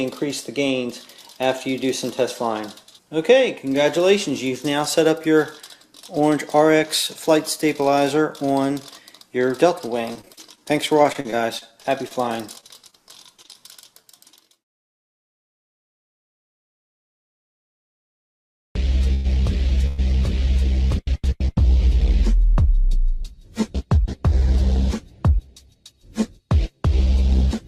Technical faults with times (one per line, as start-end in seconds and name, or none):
10.13-14.98 repeated packet loss (robotic sound)
19.14-19.26 call audio freeze
19.86-20.00 call audio freeze
25.47-25.93 jitter buffer speed-up